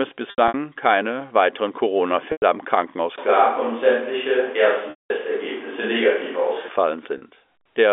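Packet loss with pitch repetition first appears at 0.30 to 0.54 s, where gaps totalling 140 ms, the longest 80 ms, are bridged by repeating the last pitch period. They recur at 2.32 to 2.42 s, 4.90 to 5.10 s and 7.18 to 7.22 s. Short gaps sound held and buzzy; longer ones fade out. On a spectrogram each shows frozen, evenly spaced harmonics that thin away, and on the waveform a repeated identical cycle decays.

From 3.18 to 6.69 s the voice turns roomy and hollow with thinner bass, abruptly in and out, likely a switch to a distant microphone. Level stays about the same, but background noise rises to about 25 dB below the speech, visible as a raised noise floor between syllables and smeared reverberant tails. Across the clip, the G.711 line keeps everything within 300 Hz to 3.5 kHz.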